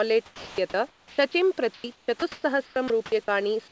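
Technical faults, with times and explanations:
0.26–0.58 s, comfort noise in place of the background: for about a third of a second before the speech resumes, the room's own background gives way to a steady, featureless hiss that sits about 4 dB lower, roughly 33 dB below the speech. The likely cause is discontinuous transmission: the sender went quiet during the pause and the receiver filled the gap with synthetic noise shaped only broadly like the real room, so its texture and detail vanish.
0.55 s, onset clipped by the voice detector: the speech returns abruptly, its first 30 ms missing, so the soft lead-in is gone and the sound seems to switch on rather than rise. This points to a voice detector that was slow to register the restart; the opening fragment was never sent and the receiver kept playing comfort noise across it.
0.88–1.34 s and 1.74–3.28 s, sound chopped by the voice detector: in both stretches the speech breaks up, with quiet syllables and word edges dropping out. 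About 320 ms is lost in the first stretch and 560 ms in the second. The likely cause is the sender's voice detector toggling repeatedly between transmitting and muting, with comfort noise inserted at each gap. The call path itself, whose G.722 coding leaves nothing above 8 kHz, sets the bandwidth of what remains.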